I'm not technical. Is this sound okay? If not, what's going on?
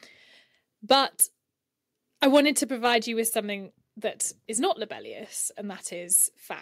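No, not quite. There are two problems.

First, microphone overload: at 0.91 to 0.95 s, and again from 2.23 to 2.39 s just before "to provide you with", the loudest bits crackle harshly. The mic's input was likely set too high, so the tops of those peaks got chopped off.

Then, at 2.64 s, right before "provide you with something", the microphone volume is stepped down. Voice and background both suddenly get quieter in one jump, likely the call software turning the mic down after those distorted peaks.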